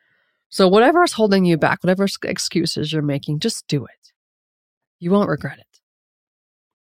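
No audible faults anywhere in the speech recording; the signal path holds up throughout.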